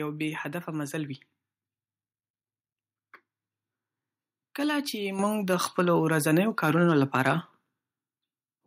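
A speech recording in which the call software judged the microphone too quiet and raised the device's input volume in one step at 5.19 s, by about 7 dB, so the voice and the background noise jump up in level together. From 4.60 s to 7.32 s the signal exceeds what a stage in the chain can pass by about 2 dB, producing hard clipping: the loudest peaks are sliced flat, adding high harmonics that sound as brief crackle on the stronger syllables rather than constant fuzz.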